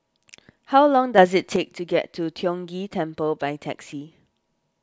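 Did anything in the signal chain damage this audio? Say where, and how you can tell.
Yes. A sudden gain jump lifts the speech and its noise floor together by about 6 dB from 1.18 to 1.56 s. The waveform envelope steps abruptly, and a spectrogram brightens across all bands. The likely cause is an unramped digital gain change in the driver or processing stage.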